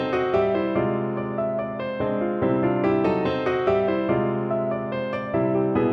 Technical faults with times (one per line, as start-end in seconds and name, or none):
none